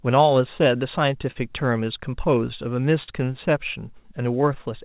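A speech recording carried over a call link whose band stops at 4 kHz, which fits G.711 mu-law at 64 kbps, with clock drift between sender and receiver running through it. The sender's clock is slow by roughly 3 percent, so the receiver keeps running short of audio and has to pad it out. That padding is heard as repeated timing corrections from 0.28 s to the end, a playback rate near 99 percent that adds something like 50 ms in small, unevenly spaced stretches. The corrections all lengthen the audio and never shorten it, so the result is a slightly slowed playback, unlike random network jitter, which pushes both ways. Two short stalls from a late packet occur at 1.31 to 1.37 s and 3.03 to 3.09 s. Each time the buffer emptied, and 44 ms of held-over sound filled the gap before the audio resumed where it left off. Nothing is lost, which is what separates these stalls from a dropout. What you hear is a brief smeared hold, not a cut.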